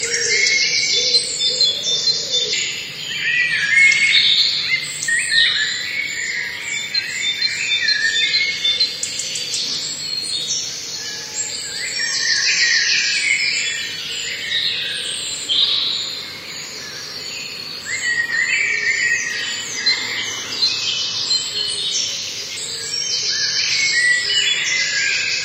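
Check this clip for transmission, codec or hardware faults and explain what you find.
The clip has one recurring codec fault. Damaged data in a compressed stream appears at 2.52, 5.07, 9.74, 13.99 and 22.56 s. Corrupted bytes make the decoder misread frames and lose sync until it locates the next frame header, leaving short chirps or blips, each under 20 ms.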